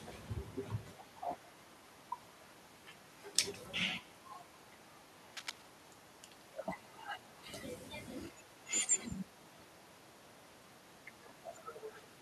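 Right from the start, the speech carries an echo with no canceller: every phrase is trailed, about 150 ms later, by a faint, thin copy of itself, sitting at about -27 dB under the voice. It's quiet, a little shadow behind each syllable. What's happening is that the far end is playing the call through a loudspeaker, its microphone is picking that back up, and nothing is stripping it out before it returns across the network.

Then from 5.30 to 5.62 s there's a burst of cable scratch noise, a dense, uneven scratchy rustle laid over the speech, only a little quieter than the voice itself, so it really jumps out for that third of a second. It sounds like a worn cable, connector or control being moved, likely with its contact resistance jumping around rapidly as it shifts.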